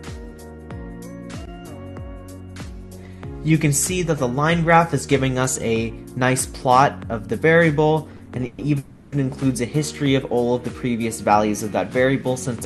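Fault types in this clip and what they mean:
Repeated stalls (stutter): between 8.11 and 8.60 s the sound halts four times, with the receiver stretching the last sound to fill about 170 ms in total. The longest hold is 120 ms, and nothing is lost, but the passage drags and stutters.
Call audio freeze: from 8.78 to 9.14 s the sound hangs for about 340 ms, sustained as a fading continuation of the last sound rather than silence, then resumes where it stopped. This points most likely to packets held up in transit, emptying the jitter buffer.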